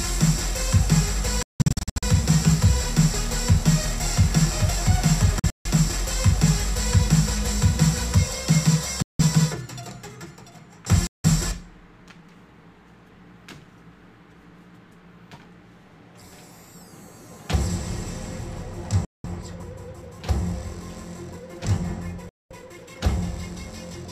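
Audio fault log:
1.43–2.03 s, 5.39–5.66 s, 9.02–9.21 s, 11.07–11.26 s, 19.05–19.26 s, 22.29–22.52 s: Bluetooth dropout. The sound cuts to abrupt silence, broken into several gaps in the first two and a single 0.17–0.21 s hole in the others, then resumes further along. The likely cause is wireless audio packets arriving too late and being discarded.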